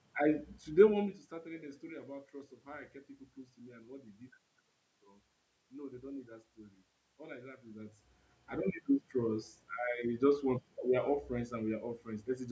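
No system faults: the level shifts around 1 s and 7.5 s come from the talker moving relative to the microphone, and the steady background is room noise.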